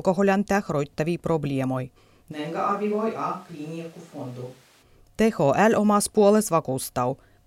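A speech recording in which, at 2.33 s, right after "tähroittavia probleemoi", the sound abruptly turns hollow, roomy and thin, drops by around 10 dB, and carries more background noise until it snaps back at 4.81 s: likely a switch to a distant microphone after the close microphone's feed dropped out.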